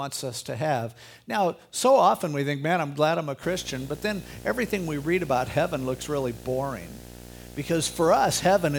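A speech recording in which, from 3.43 s to the end, a harsh 60 Hz buzz with a fizzy hash riding above it sits roughly 20 dB below the voice. This is video or display buzz, where a screen or video cable couples its picture field rate into the audio.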